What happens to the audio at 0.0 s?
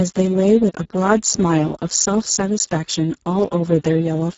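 From 0.0 s the speech sounds hoarse and noisy, with nothing above 7.6 kHz: heavy Speex codec damage running throughout, consistent with a very low bitrate near 6 kbps.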